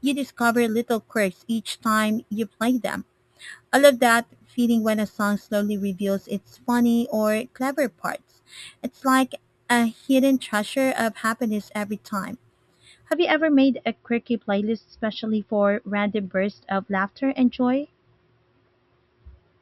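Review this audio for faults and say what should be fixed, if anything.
The speech was upsampled by repeating each sample with no smoothing filter, which points to a 12 kHz source raised to 48 kHz. The result is imaging from sample-and-hold upsampling from 0.0 to 13.13 s, ending just before "you ever made a". Mirrored copies of the speech spectrum fill 6 kHz to 12 kHz at about 18 dB below the signal. They form a bright metallic fizz that rises and falls with the speech, and the lowest copy moves opposite to the pitch. To prevent it, resample with a proper interpolation filter that removes everything above the original band.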